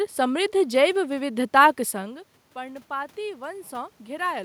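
A speech clip, and the thing to catch is automatic gain rising from about 1.04 s through 4.33 s. The level reaching the microphone falls by about 17 dB, and around 2 s that fits the talker moving back. The gain control then slowly pushes its gain up by about 4 dB to compensate, so the voice and the room noise swell together over roughly three seconds rather than the voice alone recovering.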